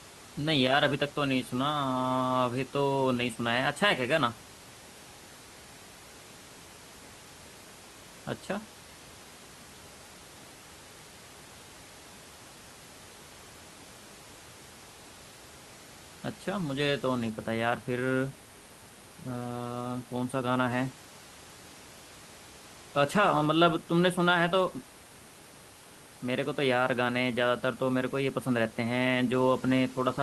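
No technical faults can be heard anywhere in it.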